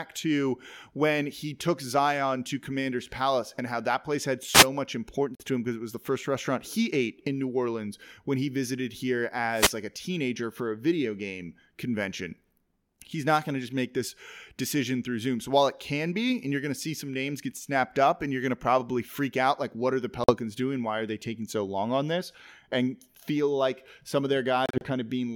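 Wireless microphone noise hit at 4.51 to 4.67 s, right after "how that place had": the FM radio link fades as reflected signals cancel, and receiver hiss surges up as a brief swish of static over the speech. A Bluetooth dropout follows at 5.35 to 5.43 s, just before "to him because it". The speech cuts to silence and picks up further along, as though it had kept playing. About 46 ms of audio is missing, which fits three lost packets, and the likely cause is packets arriving too late for the headphones. A second wireless microphone noise hit at 9.49 to 9.79 s lasts longer, a burst of static as the radio signal fades. Another Bluetooth dropout at 20.24 to 20.32 s, after "like what are the", is the same kind of clean hole of roughly 46 ms. The last, at 24.66 to 24.87 s, is broken into several short gaps totalling about 91 ms across roughly 150 ms, the longest about 31 ms, so the audio stutters rather than stopping once.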